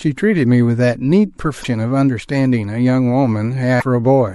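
A short speech clip with plainly audible lossy-coding damage throughout. The sound has a watery, swirling quality, with sibilants turning metallic and consonant attacks smeared. That points to MP3 compression as the likely cause. When the encoder runs short of bits, it switches weak frequency lines on and off from frame to frame. The degree of damage fits a bitrate around 64 kbps. Two brief events stand out as damaged data in a compressed stream, from 1.61 to 1.65 s and from 3.78 to 3.82 s, each lasting about 45 ms. Each is a short chirp or blip that breaks the flow of the sound. Corrupted bytes in the stream make the decoder misread the affected frames, lose sync and hunt for the next valid frame header, producing that momentary burst instead of clean audio.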